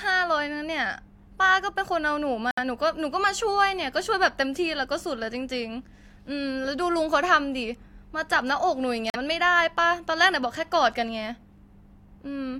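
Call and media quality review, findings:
Bluetooth stall, 2.51–2.59 s and 9.10–9.16 s: speech cuts to silence for 65 ms, then 41 ms, before continuing. Likely interference delaying packets on the wireless link, so the headphone buffer empties and playback waits for retransmitted data.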